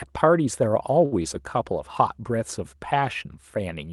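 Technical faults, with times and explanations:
1.05–1.24 s, short stall from a late packet: a packet came in late and the jitter buffer ran dry, so the receiver stretched the preceding sound by 64 ms, then resumed where it stopped. Nothing is lost, but that moment drags slightly.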